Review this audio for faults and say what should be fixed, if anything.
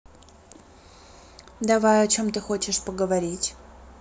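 Nothing needs fixing here, as the speech signal shows no technical faults anywhere in the recording.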